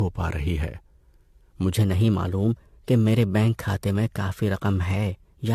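From the start, the speech sounds swirly, smeared and hollow, with blurred consonant attacks and nothing above 14 kHz. This is generation loss, likely from repeated AAC-LC encoding, around five passes, which fits a 64 kbit/s chain, with quantisation noise building on each pass.

From 1.75 s to the end, the speech turns hurried and higher, about 2 semitones up, running 1.12 times too fast. This is a section at the wrong speed, likely from playback or editing against the wrong clock, so speed and pitch shifted together.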